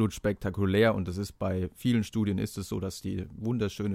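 A short speech recording, with no technical faults audible anywhere in the signal.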